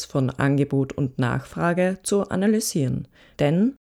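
No technical faults can be heard anywhere in the speech recording.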